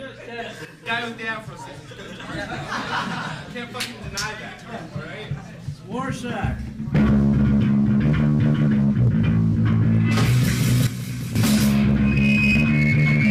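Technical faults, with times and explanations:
0.65 to 0.86 s and 10.87 to 11.36 s, sudden gain jump: sound and background noise drop together, by about 8 dB and then about 10 dB, likely from a gain change applied instantly with no ramp.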